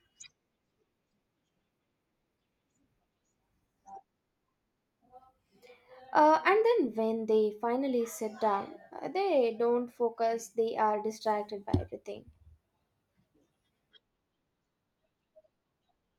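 A speech recording with nothing technically wrong with it.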